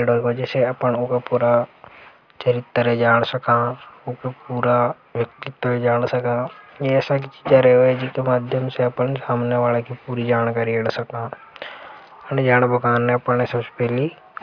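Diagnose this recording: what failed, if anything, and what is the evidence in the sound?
Nothing in the speech signal points to a failure at any stage, from capture and conversion through to storage and playback.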